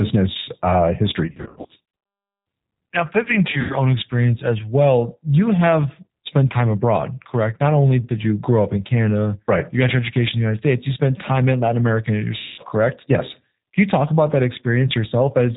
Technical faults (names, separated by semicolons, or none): G.729 codec; VoIP packet loss concealed by the speech codec